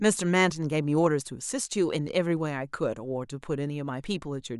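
No technical faults can be heard anywhere in the recording.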